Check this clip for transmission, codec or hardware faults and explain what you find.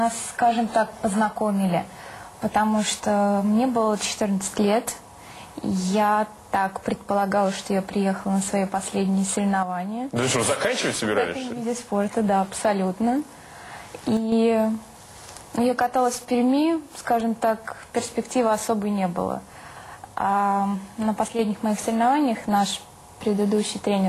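Three short, abrupt level dips point to one recurring fault.

One channel drops out, likely, at 9.63 to 10.16 s, 14.17 to 14.32 s and 21.28 to 21.39 s. With a stereo channel missing, the mono sum keeps only half of the shared content, so the level falls by about 6 dB at once and recovers just as suddenly. Anything carried only in that channel vanishes for the duration. The waveform shows square-edged steps down in amplitude, and the spectrogram shows uniform dimming across all frequencies with sharp vertical boundaries.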